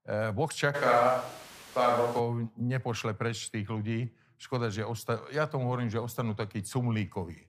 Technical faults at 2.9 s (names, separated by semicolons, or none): none